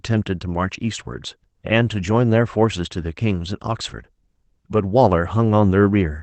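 No faults found in the speech; the audio went through a call codec whose band tops out around 8 kHz, as expected for that path.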